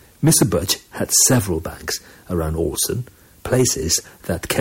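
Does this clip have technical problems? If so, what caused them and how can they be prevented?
Yes. The speech turns harsh and fuzzy on its louder stretches, from 0.25 to 0.72 s and 1.14 to 1.39 s, with a brief crackle at 2.81 to 2.83 s, and again from 3.53 s to the end. This is hard clipping. The signal overran a stage's maximum level by about 9 dB, 8 dB, 1 dB and 6 dB respectively. Its peaks were sliced flat, and those flat tops generate high harmonics that add the gritty edge. To prevent it, lower the input or recording gain so that the loudest peaks stay several decibels below full scale.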